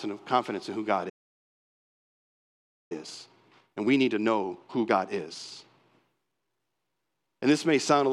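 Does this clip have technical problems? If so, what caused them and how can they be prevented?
Yes. A playback stall, likely the player starving for data or its thread being blocked, silences the speech from 1.09 to 2.92 s, about 1.8 s.

Time-compressed catch-up follows as the player cuts and cross-fades small slices to clear its backlog, so from 2.92 to 5.92 s speech runs 1.5 times fast at normal pitch.

Both can be prevented with a deeper playback buffer and a high-priority, non-blocking audio thread, plus a gentler catch-up rate or skipping ahead instead of compressing.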